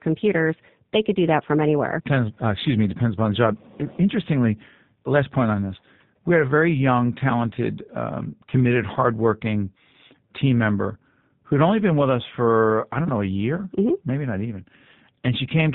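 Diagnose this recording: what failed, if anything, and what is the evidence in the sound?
The speech sounds slightly rough and synthetic from start to finish, with nothing above 4 kHz, which points to the G.729 codec at roughly 8 kbit/s. The codec stage rebuilds each 10 ms frame from a vocal tract filter, a pitch predictor and a few pulses, so the fine detail is lost.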